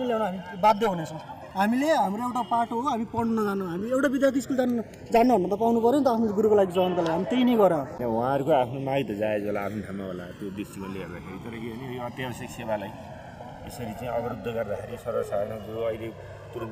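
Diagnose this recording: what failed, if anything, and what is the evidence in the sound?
A slow flanging sweep runs throughout, its comb notches gliding slowly through the spectrum when the channels are summed to mono. This is channels drifting apart at the converter stage: two devices on separate clocks, a couple of hundred ppm apart, so the inter-channel delay reaches roughly 2 ms by the end.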